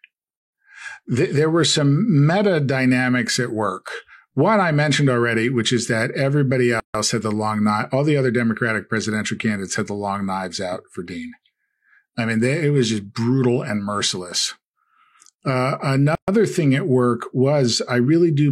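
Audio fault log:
6.80–6.95 s and 16.15–16.28 s, gap at a join of encoded pieces: separately encoded segments were joined untrimmed, leaving encoder start delay and last-frame padding in place. The speech drops out for 147 ms after "which is that everybody" and 128 ms before "thing at work", with smeared edges, then resumes where it stopped.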